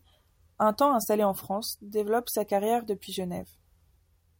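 Nothing in this bit of speech stands out as a technical fault; there's simply nothing to flag here.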